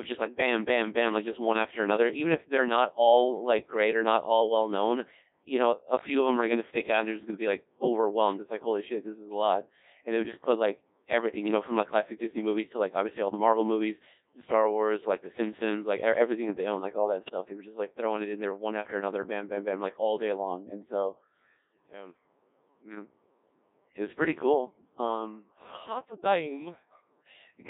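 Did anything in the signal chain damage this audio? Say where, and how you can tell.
Yes. The codec stage damaged it throughout. This is the Codec 2 vocoder, and the sound points to its 1.6 kbit/s mode. The speech is robotic and buzzy, and the band runs from 250 Hz to 3.7 kHz. The voice is rebuilt from sine waves, so the original waveform is gone. The damage is heavy.

Bit errors on digital voice radio hit from 17.24 to 17.33 s. The sound lurches in pitch, level and tone colour and turns into a brief warble. That fits roughly two corrupted frames at a bit error rate of roughly 2%. Each flipped bit misdirects a whole frame's synthesis.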